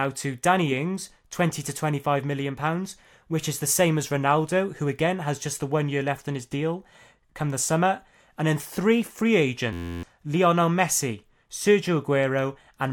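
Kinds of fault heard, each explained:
System hang loop: the machine or its driver stalled while the sound hardware kept replaying the same tiny chunk of its ring buffer. Here that happens from 9.73 to 10.03 s, where one 11.61 ms slice, which fits a 512-sample buffer, repeats a couple of dozen times. Because the loop is so short, it comes across as a steady 86.1 Hz buzz rather than a stutter, and roughly a third of a second of speech is lost.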